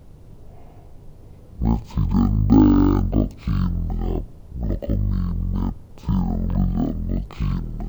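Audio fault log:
throughout, stereo read as mono: speech plays at half speed, an octave low, with a faint mirrored copy in the upper spectrum, because interleaved left-right samples are read as one channel.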